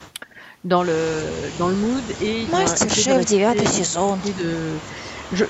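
From 0.26 s on, the speech keeps dipping: brief drops of around 10 dB near 0.3 s, shallower dips at 1.41, 1.8 and 4.88 s, and a heavy cut near 25 dB through 2.86 to 4.68 s. That's likely speech suppressed in double talk, where the echo canceller ducks the talker along with the far end.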